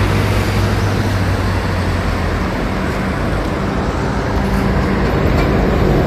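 No technical faults can be heard at any point in this sound.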